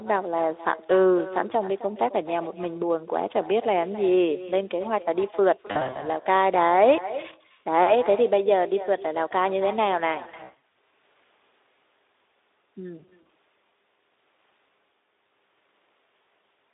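Throughout the recording, the far end plays the call over a loudspeaker and its microphone feeds it straight back with no echo canceller in the path. Every phrase returns after roughly a third of a second, about 16 dB below the direct speech. It is a faint, thinner shadow trailing each utterance across the whole clip, heard through the narrow 300 Hz to 3.7 kHz line band.

From 5.67 to 6.07 s, VoIP packet loss concealed by the speech codec appears. Short bursts of missing packets, no run longer than 60 ms and about 180 ms lost in total, force the Speex decoder to extrapolate from its last pitch and filter state while turning the gain down. The speech there briefly smears into a buzzy tone or coloured noise that fades, and it stays weak for a moment after real packets resume. The same pattern returns from 10.23 to 10.77 s, the heaviest stretch with about 300 ms lost over half a second. It comes back again, more lightly, from 12.97 to 13.32 s, where about 120 ms is lost.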